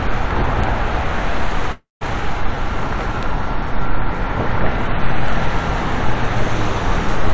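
At 0.64 s a bit error spike produces a single sharp tick. One sample jumps far from its neighbours, as if a single bit in the stored value flipped, and then returns at once. On the waveform it is a lone vertical needle. On the spectrogram it is a thin full-height line that is unrelated to the surrounding sound.

From 1.72 to 2.03 s there is a call audio freeze. The sound stops progressing and becomes a fading buzz-like continuation of its last moment. It then drops to near silence for about 160 ms before resuming from exactly where it stopped. Nothing is lost, but everything afterwards is pushed about 290 ms later. The likely cause is a jitter buffer that ran dry while packets were delayed. A spectrogram shows smeared, static bands thinning into an empty stretch, and the waveform shows a decaying envelope into a flat line.

At 3.23 s a second bit error spike gives another isolated one-sample tick with the same needle and vertical-line signature.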